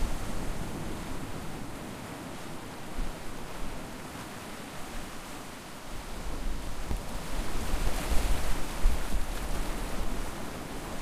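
From 0.20 s to 10.76 s, a steady run of ticks and pops comes about every 0.24 s, roughly four per second, and each one sits on the signal rather than in the gaps. These are periodic USB or driver dropouts. Something on the system stalls the USB bus or audio driver at a fixed interval, and each stall skips around 10 ms of audio outright, with no silence inserted. The waveform jumps across the missing piece and clicks. That happens about fifty times across the span.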